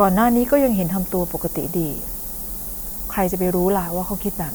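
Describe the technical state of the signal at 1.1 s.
Low bit depth with noise shaping is present at 1.1 s and throughout the speech. The signal sounds quantized to roughly 6 bits, with the rounding error pushed upward. The result is a steady, thin hiss climbing toward the top of the band, nearly as loud as the speech itself.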